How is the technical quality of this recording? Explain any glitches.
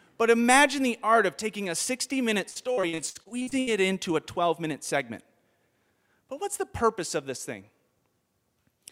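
There's one clear glitch. From 2.49 to 3.69 s, repeated packet loss (robotic sound): rapid dropouts, each up to 75 ms, get patched by stretching the preceding audio, so about a third sounds choppy.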